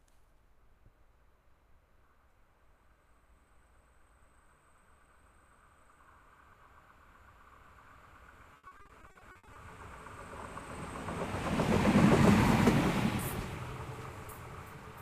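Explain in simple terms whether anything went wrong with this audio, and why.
Between 8.53 and 9.57 seconds, the audio suffers repeated packet loss (robotic sound). Over and over, small chunks of the stream failed to arrive in time, more than a dozen holes, the longest about 60 ms. Each time, the player covered the gap by stretching out the last bit of sound it had, so roughly 0.44 seconds of that one-second stretch is filler rather than real audio. That's why this passage sounds choppy, with pieces missing.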